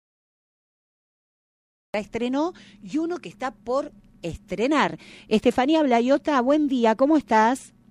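The audio opens on dead digital silence until 1.94 s, then lands abruptly in the middle of a sound with no attack or fade-in. This is a cut-off start: capture or streaming began late, so the material before 1.94 s was lost.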